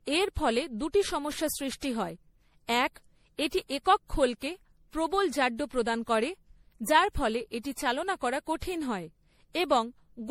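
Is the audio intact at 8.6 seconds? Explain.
No. At 8.6 s, as throughout the clip, the speech sounds swirly, hollow and smeared, with blurred attacks. This is likely generation loss: repeated MP3 re-encoding, roughly seven passes at a rate fitting 64 kbit/s, each quantising on a shifted frame grid. The damage is heavier than a single encode at that bitrate would produce.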